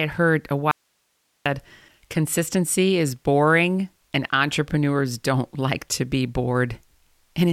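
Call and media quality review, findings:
Audio dropout to a faint residue at 0.71–1.46 s, right after "heard a". Speech cuts hard for about 0.74 s, then snaps back mid-flow. The gap holds only hiss, roughly 50 dB below the speech. Likely an upstream capture or transport break, with the downstream path still live and passing its own noise floor.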